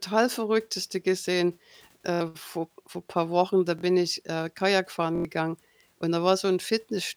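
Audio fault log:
2.14–2.21 s, 3.79–3.83 s, 5.16–5.25 s: repeated buffer. New audio arrived late, so a 23 ms piece replayed three, two and then four extra times. Each repeat makes a stutter with hard joins, which fits a 1024-sample buffer. Roughly 70, 50 and 100 ms are lost. The first two fall just before "vor vor paar" and "ich äh".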